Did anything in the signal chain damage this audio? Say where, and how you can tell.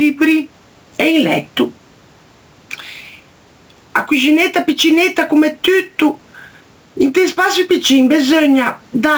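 Yes. Across the whole clip the gain is pulled down by around 10 dB under each loud syllable, and the speech sounds flattened in level. This is gain pumping, likely from input gain set far too high, with a fast limiter clamping each peak.

The converter's sampling clock is also unstable, with timing wander of roughly 7 µs. Each sample lands slightly off time, so steep, loud, bright passages pick up a rough hiss about 25 dB below the speech that disappears in silence. This is sample clock jitter, and it persists throughout.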